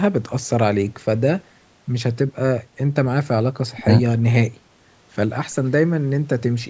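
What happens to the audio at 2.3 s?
At 2.3 s the speech carries on intact with no fault, its sound shaped only by the ordinary call microphone processing that trims the lowest bass and leaves nothing above 8 kHz.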